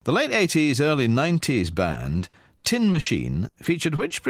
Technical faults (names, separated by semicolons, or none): repeated packet loss (robotic sound)